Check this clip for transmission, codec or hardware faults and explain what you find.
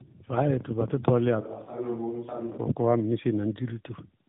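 Two faults are present: tandem speech coding throughout, and a switch to a distant microphone between 1.42 and 2.56 s.

Throughout, the speech sounds rough, muffled and warbly, with nothing above 3.8 kHz. This is tandem speech coding: the signal was decoded and re-encoded twice, which fits AMR-NB on both sides of a G.711 link.

From 1.42 to 2.56 s, the voice turns suddenly hollow and roomy, about 10 dB quieter, with room noise roughly 30 dB below it. This is likely a switch to a distant microphone.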